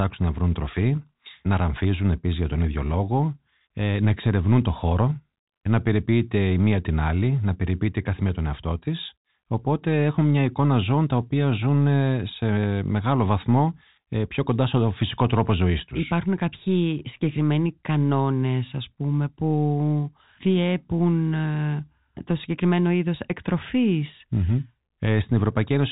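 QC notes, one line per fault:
No faults to note.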